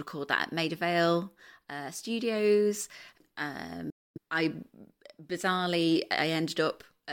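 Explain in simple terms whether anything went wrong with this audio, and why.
A Bluetooth dropout cuts the speech to silence from 3.90 to 4.18 s, likely because audio packets reached the headphones too late and were dropped.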